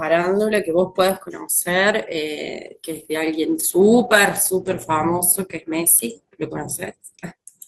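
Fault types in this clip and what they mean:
Call bitrate drop: from 2.69 to 6.23 s the encoder's rate falls from 32 to 13 kbps, staying at its lowest for about 2.2 s. The speech turns coarse and muffled, and a spectrogram shows the upper band thinning and smeared, blotchy detail below.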